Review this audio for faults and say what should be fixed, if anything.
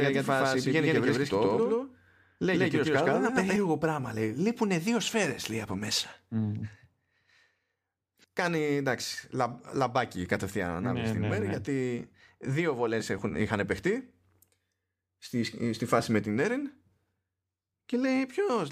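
From the very start until 3.56 s, the speech carries a doubled audio track. A second, full-band copy trails the original by roughly a tenth of a second at about the same level, with no decay or room colouring, and it ends abruptly at 3.56 s. The likely cause is the same signal reaching the mix twice, once through a slower path. On a spectrogram, every syllable's harmonics and onsets appear twice, evenly offset. The waveform shows each transient followed by a matching twin. Prevent it by routing each source to the mix only once and monitoring for duplicate feeds.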